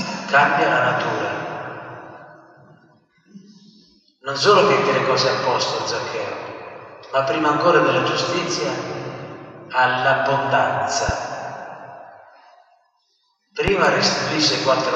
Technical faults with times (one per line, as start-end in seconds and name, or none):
11.09-11.12 loud pop
13.68-13.88 loud pop